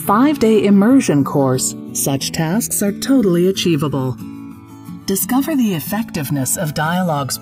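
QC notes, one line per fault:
Throughout: channels drifting apart. The left and right channels were captured on two devices running from separate clocks that disagree by something like a couple of hundred parts per million, so the time offset between them keeps growing, reaching roughly a millisecond and a half by the end. Folded to mono, that sliding offset drags a set of comb-filter notches steadily through the spectrum, giving a slow, sweeping flanging.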